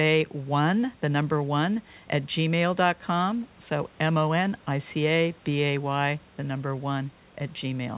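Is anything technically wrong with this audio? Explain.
No, nothing is technically wrong with this audio.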